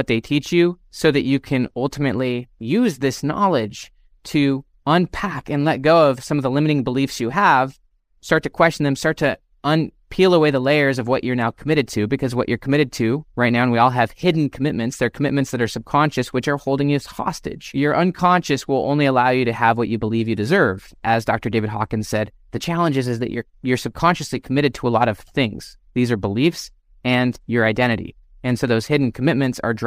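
No technical faults can be heard anywhere in the recording; the signal stays continuous and stable throughout its whole duration.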